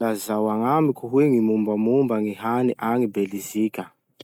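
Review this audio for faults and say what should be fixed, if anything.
No faults found; nothing needs fixing.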